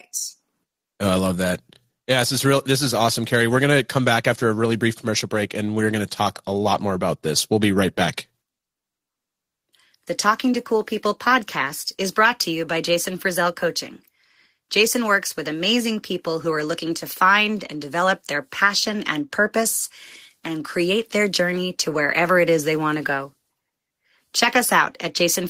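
A speech recording, and nothing technically wrong can be heard in it.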